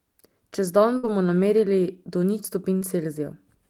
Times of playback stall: none

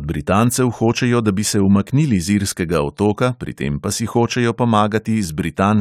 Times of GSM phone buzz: none

